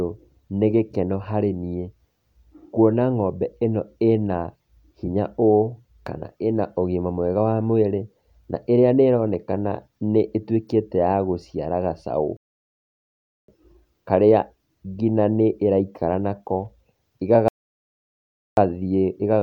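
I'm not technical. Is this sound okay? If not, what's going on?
No. Twice the player ran out of downloaded audio and had to wait for more to arrive, a rebuffering stall. From 12.37 to 13.48 s, and again from 17.48 to 18.57 s, the speech drops into silence for about 1.1 seconds, then picks up exactly where it stopped. Nothing is skipped or lost, but each pause adds that extra second to the clip and breaks the flow of the speech.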